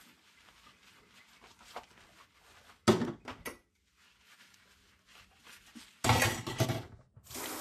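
Throughout, nothing survives above 14.1 kHz and the treble goes hissy and grainy, pointing to a low bitrate around 34 kbps, likely from Vorbis compression.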